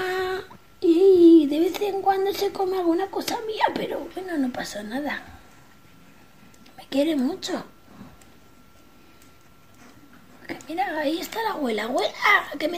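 Compressed frames skipped at 10.96 s: about one 26.1 ms frame never reaches the output, so the sound jumps ahead by about 30 ms.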